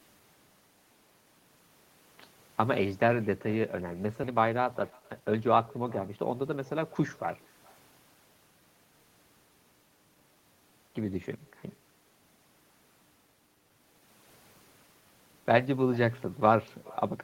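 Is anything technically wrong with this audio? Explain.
Yes, there are three faults.

Throughout the clip, every phrase is trailed by a faint, thin copy of itself arriving about 400 ms later, at about 26 dB below the speech. This is echo with no canceller. The far end's loudspeaker output was picked up by its own microphone and sent back across the network, and nothing at that end subtracted it. The talker hears their own sound returning after the round trip.

At 4.23 s the speech jumps abruptly forward with no pause, and about a second of material is simply gone. The sounds on either side are butted together. This is a skip ahead. Audio that was queued behind a backlog was discarded, either in transit or by an overfull jitter buffer, and playback resumed from the newer audio. That cut the built-up delay by roughly a second in one step.

From 4.27 s to 6.58 s the speech sounds rushed, running at about 118% speed with no change in pitch. 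This is jitter buffer speed-up. The buffer still held more audio than its target, so the receiver repeatedly trimmed out tiny segments of one or a few pitch periods each. Together these removed roughly 400 ms until the delay came back down.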